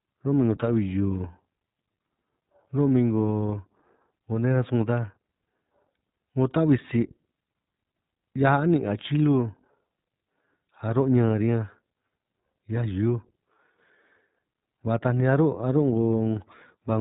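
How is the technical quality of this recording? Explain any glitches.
The recording is narrowband and audibly coded. Throughout, iLBC codec damage: nothing above about 3.8 kHz, and each 20 ms frame coded independently, leaving speech clear but roughened and synthetic, unlike simple low-pass muffling.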